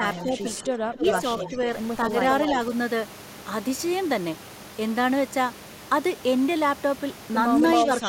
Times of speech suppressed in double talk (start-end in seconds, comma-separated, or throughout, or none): 0.00-1.68